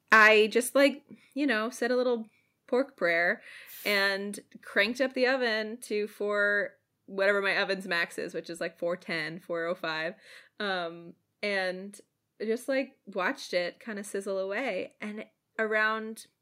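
From 0.12 to 0.28 s, just before "just like you know", the speech peaks flatten into a harsh, crackly edge. This is microphone overload: the signal appears to drive about 6 dB past the converter's ceiling, so the waveform tops are sliced off and a few percent of samples are clipped. The squared-off peaks add dense upper harmonics, which is why the loudest syllable sounds gritty rather than simply loud. The likely cause is an input gain set too high for the talker's level.

At 1.02 s, between "just like" and "you know said a", the whole signal drops by about 3 dB in a single step. Speech and background fall together, with no fade. This is the microphone volume being stepped down, likely by the call software reacting to the earlier clipped peak and lowering the device input gain. Because the change is instant, it is heard as an abrupt dip in presence rather than a gradual fade.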